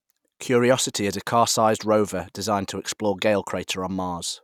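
Nothing in the speech stood out as a technical fault on listening.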